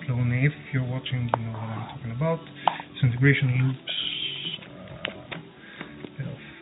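Nothing stood out as a technical fault on listening.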